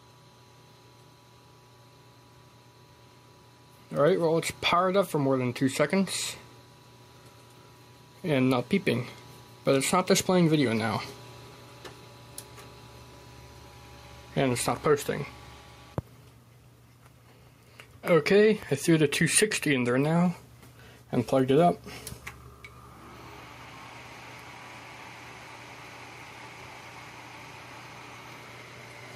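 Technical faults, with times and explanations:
throughout: gain pumping. The input gain was likely set far too high, with a fast limiter or compressor pulling it down on each loud sound. The level swings by around 10 dB as it ducks and recovers, squashing loud and soft parts closer together.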